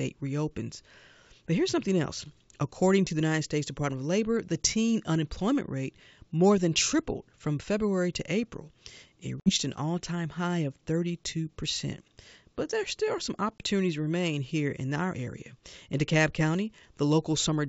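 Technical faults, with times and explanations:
9.40–9.51 s and 13.58–13.66 s, packet loss on an ADPCM call: hard 60 ms and 20 ms silences, then distorted recovery as the decoder's predictor resynchronises, unlike a clean dropout.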